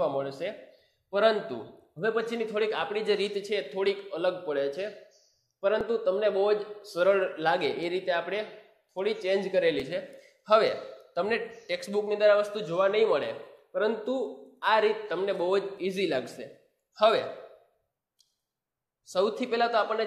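At 5.81–5.83 s, 9.80 s and 15.78 s, overlap between stream segments at 2-second joins makes the player discard real audio, leaving a waveform jump heard as a tiny skip.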